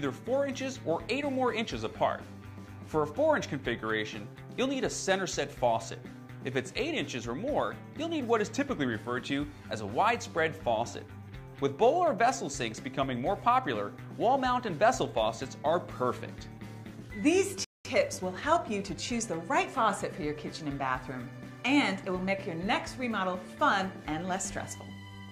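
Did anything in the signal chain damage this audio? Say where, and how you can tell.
Yes, the damage is at the playback stage. The first fault is a playback stall. At 17.64 s the sound stops in mid-flow. The output stays silent for about 205 ms, until 17.85 s. The break is silence. The likely cause is a player that ran short of buffered data, or had its output thread blocked, so nothing reached the converter.

Right after the gap comes time-compressed catch-up. From 17.85 s to 19.89 s the audio runs hurried, at about 1.1 times normal speed. The pitch does not rise. That pattern shows the player trimming its backlog. It cuts out short pieces and cross-fades the joins, so it regains the lost time without shifting the pitch.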